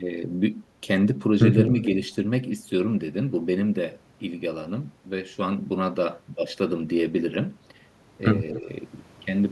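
From 1.83 to 1.97 s a faint delayed copy of the speech comes through. This is an echo leak, lagging the original by 252 ms and sitting roughly 20 dB below it. It likely comes from a far end on loudspeaker whose echo canceller let part of the returned signal pass. The same echo leak recurs briefly from 8.53 to 8.59 s, with the same 252 ms lag and similar low level.

Overlapping its tail, from 8.58 to 8.68 s, the speech dips by around 10 dB for about a tenth of a second. This is speech suppressed in double talk. With both sides active at once, the canceller was likely unable to separate the local talker from the loudspeaker echo and attenuated both, so the speech briefly sounds pulled down.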